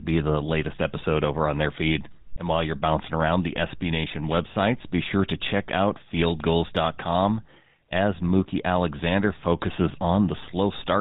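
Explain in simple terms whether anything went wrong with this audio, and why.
The speech sounds buzzy and gravelly from the first second to the last, with a dull, muffled top end, like an old mobile phone call. That is the GSM full-rate codec at work, and its damage is plainly audible here. The codec rebuilds the voice from a simple model of the throat and mouth driven by evenly spaced pulses, which creates the rough buzz, and it discards everything above 4 kHz, which removes the crispness.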